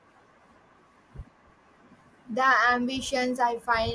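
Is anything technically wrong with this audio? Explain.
No, nothing technically wrong can be heard in this speech recording; the signal stays continuous and intact throughout.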